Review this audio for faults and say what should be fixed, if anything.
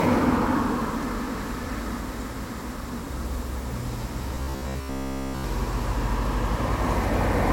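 From 4.35 to 5.44 s, robotic sound from repeated short buffers gives a rigid 66.8 Hz buzz, likely a roughly 15 ms block replayed. Unlike mains hum, it follows the sounds' loudness. A larger input buffer or higher-priority audio thread would keep fresh audio arriving on time.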